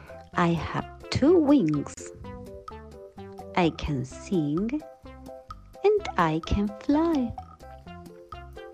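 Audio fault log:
1.94–1.97 s, gap at a join of encoded pieces: the sound drops out for about 33 ms with smeared edges, then resumes where it stopped. Two separately encoded pieces were joined untrimmed, so the encoder's start delay and last-frame padding left silence.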